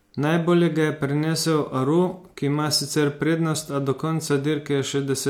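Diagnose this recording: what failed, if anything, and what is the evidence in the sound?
Nothing in the signal points to a failure at any stage of the chain, from capture and conversion through transport and playback.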